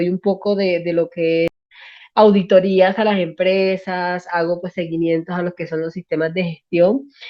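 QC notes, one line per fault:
1.48–1.72 s, stream reconnect: a 0.23 s gap as the connection drops, then the speech resumes roughly 0.3 s further on from a freshly started decoder.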